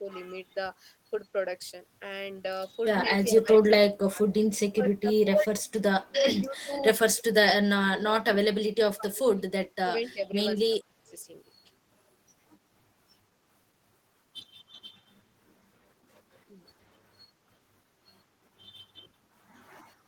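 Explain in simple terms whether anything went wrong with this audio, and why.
Speech suppressed in double talk at 0–0.08 s, 3.03–9.46 s and 9.81–11.11 s: the speech dips and breaks up, likely an echo canceller turning down both sides at once.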